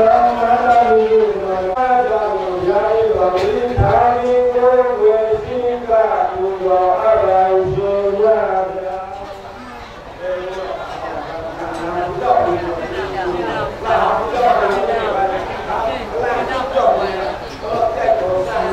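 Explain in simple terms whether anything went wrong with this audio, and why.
Nothing went wrong with this audio, as no technical faults can be heard anywhere in it. The sound has no glitches.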